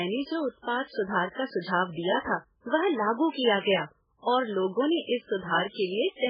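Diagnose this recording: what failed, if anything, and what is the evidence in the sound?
The codec stage failed, most likely from MP3 compression at a very low bitrate, around 8 kbps. Throughout, the speech has nothing above 5.1 kHz and sounds heavily watery and swirling, with smeared attacks. A plain low-pass filter would dull the treble without that frame-to-frame warble.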